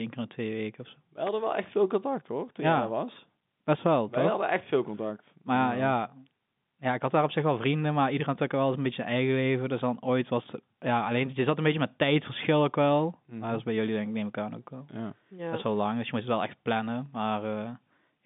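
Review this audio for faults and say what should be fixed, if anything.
At 1.27 s a sharp, dry snap cuts across the speech, over in about 15 milliseconds and sitting on top of the sound rather than replacing it. That is an electrical switching spike, likely from a nearby switch, relay or static discharge arcing briefly and coupling into the audio line; the snap still comes through despite the narrow telephone band of the G.711 coding. Keep audio cabling away from switched power and motors, and use shielded, grounded leads.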